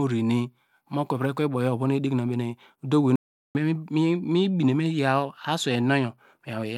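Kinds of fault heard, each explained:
Audio dropout to silence: from 3.16 s to 3.55 s the speech cuts off mid-flow into 0.39 s of silence, with even the room tone gone, then resumes abruptly. Unlike a natural pause or noise gate, nothing fades, likely because the input was lost or muted.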